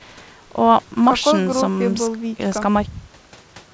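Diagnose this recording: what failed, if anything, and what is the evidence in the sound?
Nothing failed here: the speech comes through a call path that's doing its job, with nothing above 8 kHz, which fits a wideband codec such as G.722 running at around 64 kbps.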